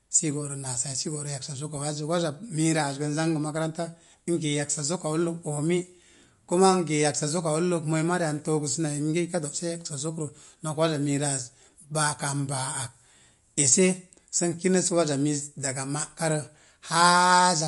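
Speech, with MP3 compression damage audible across the whole clip. Nothing reaches above about 11.2 kHz, so the treble is cut off flat, and the sibilants come out dull and metallic. Quieter spectral detail flickers in and out between frames, giving a watery, swirling texture. This is likely heavy MP3 encoding: the damage and the low cut-off fit a starved bitrate, around 48 kbps, where the encoder drops high frequencies and weak components to save bits.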